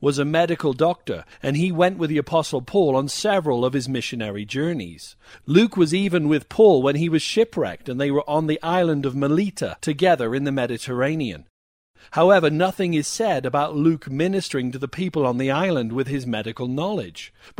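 From 14.43 to 14.53 s, just before "to the people on", the speech breaks into a brief patch of noisy blips. This is DAB burbling: weak reception let a small fraction of bit errors slip past error correction, so corrupted audio data put short noise blips into single sub-bands across 8 frames.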